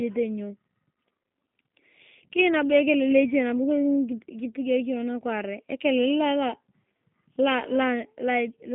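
From start to finish the speech carries G.729 codec damage. Everything above 3.6 kHz is gone and the low end thins out below about 150 Hz, and the voice sounds plainly rough and slightly synthetic. That fits an 8 kbit/s coder rebuilding each 10 ms frame from a vocal tract filter, a pitch predictor and a few pulses. A simple telephone band-limit would only sound muffled. Here the added buzzy roughness shows the speech was resynthesised.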